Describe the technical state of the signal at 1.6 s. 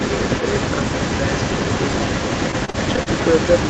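At 1.6 s an echo leak is audible, as it is across the whole clip from 0.0 to 3.69 s. A delayed copy of the speech trails the original by about 278 ms. It sits only slightly below the direct sound, roughly 5 dB quieter. The likely cause is a far-end loudspeaker whose echo canceller failed to strip the microphone pickup. That leftover was sent back. The result is a doubled quality, with a delayed repeat of one voice coming back behind the speech.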